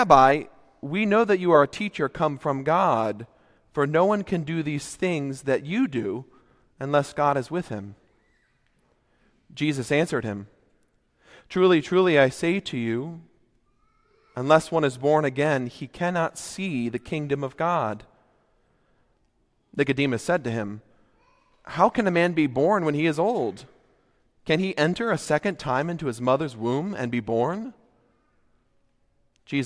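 No technical faults are audible anywhere in the recording.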